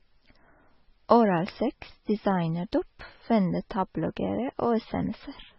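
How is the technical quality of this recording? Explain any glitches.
Poor, with one fault running through the whole speech clip. Likely transcoding between lossy codecs: a very low-bitrate MP3 re-encoded as AAC-LC, so artefacts stack and nothing above 5.7 kHz survives, leaving a dull, swirly sound.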